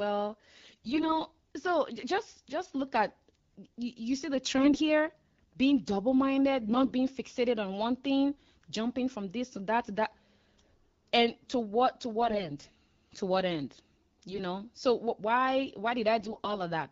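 AMR bit errors roughen the speech at 0.53–1.20 s (before "so just just look"), 4.58–4.78 s (after "you see the"), 6.66–6.92 s (between "being double" and "being fixated on one"), 12.20–12.42 s, 14.29–14.43 s and 16.19–16.58 s. Flipped low-priority bits misplace excitation pulses and skew gains, turning the light wideband coding hoarse and gargly at steady pitch and level. Spectrograms show smeared, noisy harmonics; waveforms keep their envelope.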